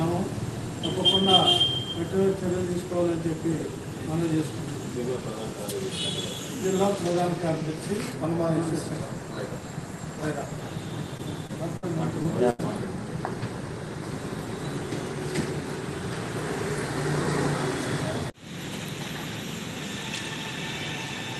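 Short concealed packet loss at 11.17 to 11.21 s and 11.47 to 11.51 s: about 20 ms of audio failed to arrive in time, and the receiver filled the hole by extending the preceding sound before blending back, leaving a brief smear or wobble. A burst of packet loss follows at 11.77 to 11.84 s, where about 60 ms went missing. Concealment stretches the last sound and fades it, heard as a held buzz or dying hiss, and playback resumes further along with that stretch gone. Another short concealed packet loss at 12.22 to 12.26 s gives the same momentary wobble over about 20 ms. A second burst of packet loss at 12.50 to 12.61 s drops about 80 ms, a longer faded fill before the sound picks up again. All of this sits on an Opus call path whose coding limits the top end to about 12 kHz.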